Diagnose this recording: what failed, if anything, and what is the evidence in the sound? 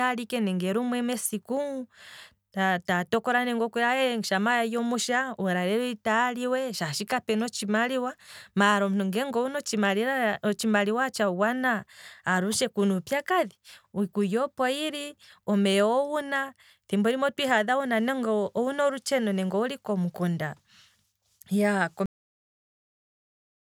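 The failure is a cut-off end, at the storage or buffer stage. At 22.06 s the speech stops mid-sound. It falls straight to digital silence, with no decay, until the end. The final buffers were never written, so that audio is simply gone.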